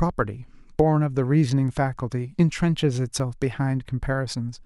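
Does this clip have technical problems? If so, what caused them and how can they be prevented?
Yes: at 0.80 s and 3.20 s the speech jumps ahead with no gap, unlike a dropout's silence; likely a dropped buffer (overrun) losing roughly 10 ms and 5 ms. A larger capture buffer or higher-priority recording thread would prevent it.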